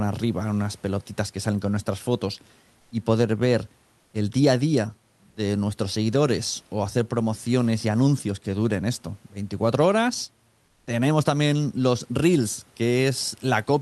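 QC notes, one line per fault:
5.29–5.35 s, sound dropped by the voice detector: right after "el día a día" and just before "nuestros seguidores o hacer", about 60 ms of audio gives way to flat, steady noise, and roughly 30 ms of real speech sound is missing. The sender's voice detector likely took that soft stretch for background under Opus DTX and stopped transmitting. Unlike plain comfort noise in a pause, actual speech is cut here.
10.69–10.87 s, comfort noise in place of the background: for about 180 ms just before "también los reels", the room noise, sitting about 44 dB below the loudest speech, turns into smooth, featureless hiss roughly 2 dB quieter. During a gap the sender likely sent only occasional background updates, and the receiver synthesised noise shaped to match. No speech is lost, which sets it apart from the earlier dropout. Only the background's texture and level shift briefly.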